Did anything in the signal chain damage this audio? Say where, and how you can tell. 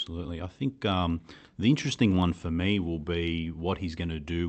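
No, nothing in the chain damaged this speech; it came through an ordinary call path whose top end stops at about 8 kHz, which fits an Opus call codec running at a modest bitrate of around 32 kbps.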